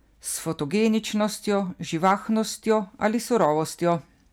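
At 2.05 to 2.13 s, and again from 2.70 to 3.46 s, the speech shows hard clipping. The signal exceeds what a stage in the chain can pass, by about 3 dB in the first burst and about 2 dB in the longer second stretch, so the waveform peaks are sheared flat. Those squared tops generate high-order harmonics, heard as a brittle crackle riding on the louder syllables rather than a continuous fuzz.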